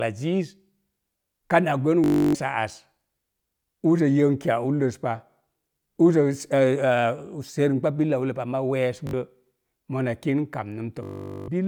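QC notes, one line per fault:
2.04 to 2.35 s, 9.07 to 9.13 s, 11.03 to 11.48 s: Bluetooth stutter. Data arrived late or was lost, so the receiver looped its last short slice of about 20 ms. This gives a machine-gun buzz lasting 0.30 s, 0.06 s and 0.45 s. The speech then resumes further on, with the gap skipped.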